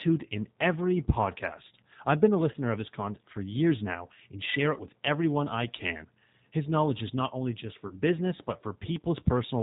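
Throughout, the speech sounds band-limited and slightly rough and synthetic, with nothing above 4 kHz; this is the G.729 codec rebuilding the voice at 8 kbit/s from a vocal tract filter, pitch predictor and sparse pulses. At 2.52 s, after "podcast I've been a" and before "of his content for", a brief stretched, fading sound replaces about 20 ms of sound, and the voice stays weakened until about 2.56 s. The same happens at 4.74 s, after "years now and share" and before "everyone I can", with the dip lasting until about 4.82 s. At 7.88 s, after "is not only just", it lasts until about 7.97 s. Each is VoIP packet loss concealed by the speech codec: each gap fits a single lost packet, which the decoder filled by extending its last pitch and filter with falling gain before the restored frames recovered.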